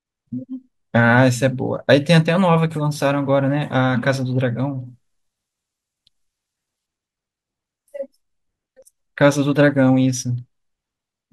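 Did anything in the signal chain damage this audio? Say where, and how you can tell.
Yes. From 4.86 to 6.86 s the speech turns thin, bright and hissy, with sibilants spitting forward. That is pre-emphasis left on at the playback stage: the treble sits about 8 dB high at 10 kHz relative to 1 kHz, consistent with an undone CD-style 50/15 µs curve.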